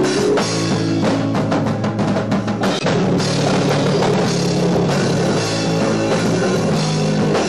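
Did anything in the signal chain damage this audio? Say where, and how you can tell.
Yes, there's damaged data in the compressed stream, so the fault sits at the codec or storage stage. You get three short glitches, at 0.38 to 0.43 s, 2.79 to 2.84 s and 4.14 to 4.19 s, each about 50 ms long. Some of the encoded bytes were corrupted there, so the decoder misread those frames, lost sync and had to hunt for the next valid frame header before it could carry on cleanly.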